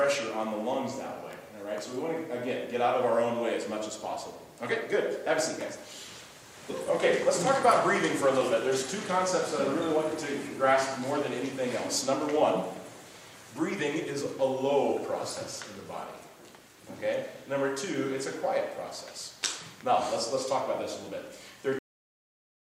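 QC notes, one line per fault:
21.79 s, cut-off end: the sound stops mid-event and drops straight to digital silence for the last 0.8 s, because the final buffers were never written.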